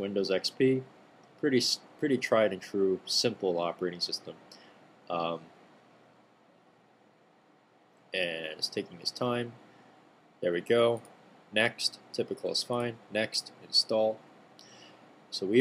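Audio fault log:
3.24 s and 13.83 s, dropped samples: each spot has one isolated click, a thin vertical line in the spectrogram. It's likely a tiny fraction of a millisecond of samples went missing, so the waveform jumps straight to a later value without removing any audible sound.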